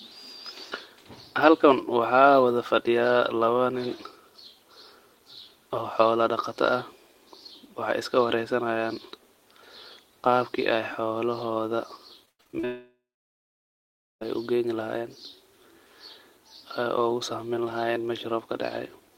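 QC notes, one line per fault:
12.25–12.65 s, repeated packet loss (robotic sound): six short breaks, the longest 100 ms, arrive in quick succession. Each is patched by stretching the preceding sound, so about 59% of this stretch is concealment, giving a choppy, robotic texture with fragments missing.
12.65–14.23 s, long network dropout: about 1.56 s of audio is lost. A fading buzz or hiss continues the last sound, then roughly 1.2 s of silence follows before the audio resumes without the missing part. The likely cause is an extended interruption in the network stream.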